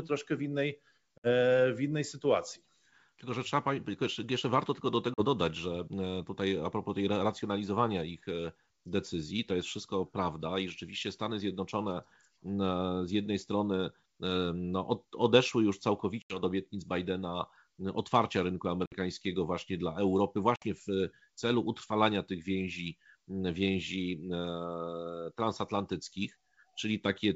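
Packet loss on an ADPCM call drops a few packets at a time at 1.18 s (60 ms, after "troszkę w innej"), 5.14 s (40 ms, before "dodać że"), 16.22 s (80 ms), 18.86 s (60 ms, before "właśnie dla") and 20.56 s (60 ms). The decoder's predictor and step size lose sync with the sender, so after each hard-edged silence the speech returns slightly distorted before settling.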